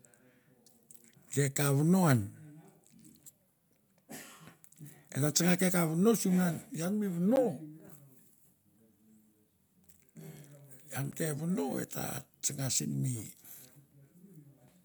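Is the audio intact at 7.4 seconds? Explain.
No. At 7.36 s the speech drops into a block of digital silence about 11 ms long, which fits a 512-sample buffer that the program left unfilled and sent out as zeros. The signal cuts out and back with no fade, and at this length it is heard as a tick or dip rather than as silence. A fade-out dropout would be softer, and a lone-sample glitch gives a single click with no gap.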